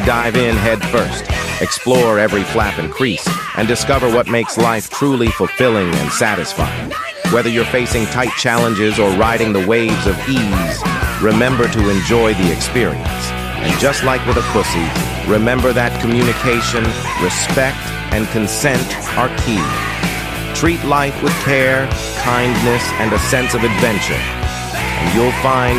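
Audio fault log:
15.63–16.86 s, train of clicks: a run of about fifteen identical pulses at a regular 12.2 per second ticks over the sound, peaking around 10 dB above it, most likely interference from nearby equipment or a faulty connection injecting the same pulse repeatedly.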